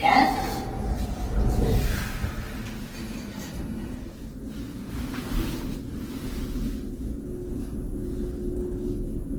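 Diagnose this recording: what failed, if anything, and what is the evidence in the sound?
The fault sits at the codec stage and lasts throughout: tonal parts of the sound turn rough, grainy and noisy, yet content still reaches about 20.1 kHz. This is likely Opus compression in CELT music mode, with noise-filled bands pointing to a bitrate near 16 kbps.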